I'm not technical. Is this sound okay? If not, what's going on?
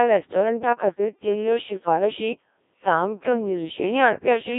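No, the speech has gone through a Codec 2 vocoder, a digital-radio voice codec, for the whole clip. It rebuilds the voice from simple tones rather than keeping the real sound, so it comes out robotic and buzzy, heavily mangled, with nothing above about 3.7 kHz.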